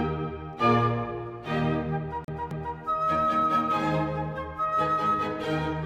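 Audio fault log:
2.24 to 2.77 s, CD stuck on one turn: a scratch keeps knocking the laser back one track at the same point of each revolution, so the player rereads the same stretch of track instead of moving on. A slice of about 0.26 s plays twice in a row, with a brief mute at each jump back, giving the quick, evenly spaced stutter of a skipping disc before playback carries on past the damaged spot.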